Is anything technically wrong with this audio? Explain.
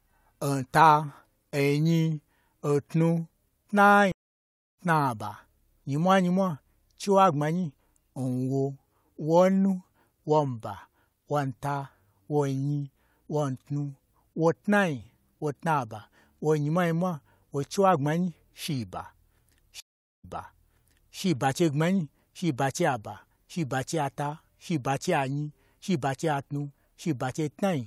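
Yes, there are two stream reconnects. At 4.12 s the audio goes silent for 0.66 s and resumes roughly 0.7 s further on. At 19.80 s a 0.43 s gap is followed by audio restarting 0.96 s earlier, repeating material. In both cases the connection dropped and a fresh decoder restarted mid-stream, fading in.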